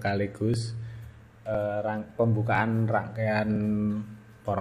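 A brief click or stutter interrupts the sound at 0.54, 1.55, 2.55 and 3.56 s, one per second. These are overlapping chunks: the audio was handled in 1.0 s blocks, and each new block began about 7 ms before the previous one finished, so that sliver of sound plays twice at every join. The repeated fragment breaks the waveform's continuity, producing the regular tick.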